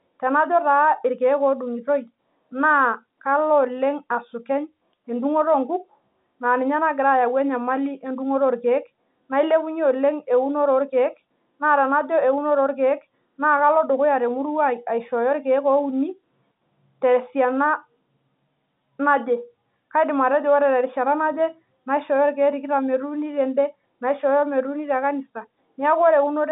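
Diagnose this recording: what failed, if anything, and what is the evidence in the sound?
Nothing stood out on listening: the speech comes through the narrow telephone band, topping out just under 4 kHz, with no audible failure at any point in the recording.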